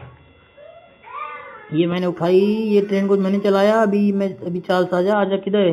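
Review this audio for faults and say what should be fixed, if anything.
From 1.98 to 5.13 s there is imaging from linear upsampling: straight-line interpolation, which fits an 8 kHz source raised to 44.1 kHz, dulls the top below 4 kHz and leaves a faint metallic shimmer. On a spectrogram this appears as a mirrored copy in the 4 to 8 kHz band, roughly 30 dB below the signal. Resampling with a proper band-limited (windowed-sinc or polyphase) filter would prevent it.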